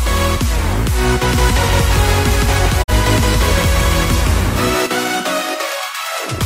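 A doubled audio track runs from 1.35 to 4.87 s: a second, full-band copy trails the original by roughly 150 ms at about the same level, with no room colour, and cuts in and out abruptly. It is likely a slower second capture path mixing in.

A digital broadcast dropout hits at 2.82 to 2.90 s. The receiver muted after failing to decode the signal, fading to silence over 20 ms and losing about 43 ms of audio, which fits a single lost frame, before sound returns.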